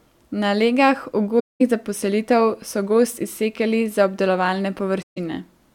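A speech recording with two gaps from AAC frame loss with muting. The first runs from 1.39 to 1.62 s, about 0.21 s of silence. That fits roughly ten lost frames. The second runs from 5.02 to 5.18 s, about 0.15 s, which fits around seven frames. In each case the decoder had no data and zeroed the spectrum. The overlapping windows fade the sound down into the hole and back up after it, so the edges sound soft.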